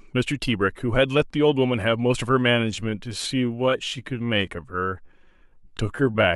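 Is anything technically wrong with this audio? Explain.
Yes. From 2.47 s to the end at 6.36 s there is a time-stretched section: the speech abruptly slows to about 0.73 times its pace yet keeps its pitch, so it drags. This is likely software repeating short slices to lengthen the audio. Unlike a tape slowdown, the pitch never drops.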